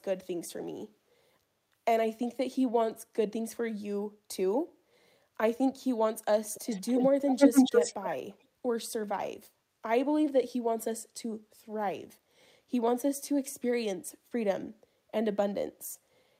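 Speech with an echo leak: a copy lagging 278 ms returns at 6.46–7.05 s, 7.28–8.1 s (louder than the speech) and 8.3–8.46 s, likely a far-end speakerphone's echo canceller missing it.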